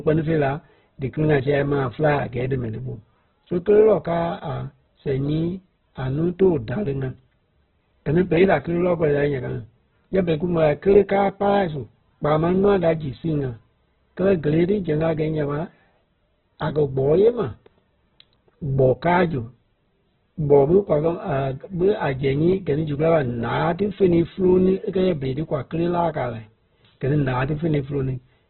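Opus compression runs through the whole clip, and the sound points to a very low rate of around 8 kbps. Nothing reaches above 4.2 kHz, so the speech is narrowband and boxy, with sibilants dulled and the top end missing. The damage is heavy: the voice sounds rough and grainy rather than swirly, likely because the encoder, in its music mode, refills starved bands with folded or noise-like content instead of leaving gaps.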